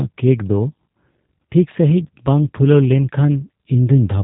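From start to end the speech carries G.729 codec damage, plainly audible: it is rebuilt from a vocal tract model and sparse pulses, with nothing above 3.8 kHz, so it sounds rough and slightly synthetic, consistent with an 8 kbit/s stream, unlike a clean band-limit.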